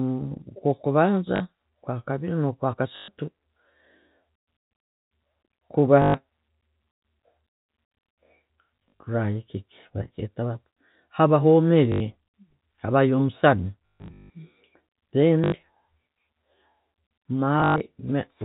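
Packets of this G.711 telephone speech are lost and the receiver fills each gap by replaying the last good packet: packet loss with last packet repeated. It happens at 1.36–1.40, 2.96–3.08, 6.02–6.14, 8.87–9.04, 11.92–12.00, 13.86–14.30, 15.44–15.52 and 17.60–17.80 s. The repeats ignore the pitch cycle, and longer runs buzz at 50 Hz, which fits 20 ms packets. The result is a robotic stutter, worst at 13.86 s, where one run lasts 160 ms.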